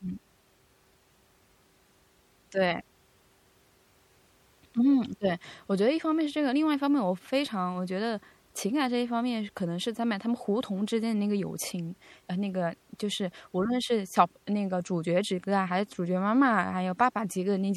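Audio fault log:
Throughout, MP3 compression: the speech has a plainly audible watery, swirling quality, and the s sounds break into metallic chirps. This is likely lossy MP3 encoding at a low rate, which fits a bitrate around 64 kbps. With too few bits, the encoder drops weaker frequency lines, which then flicker in and out from frame to frame. That flicker is the swirl you hear.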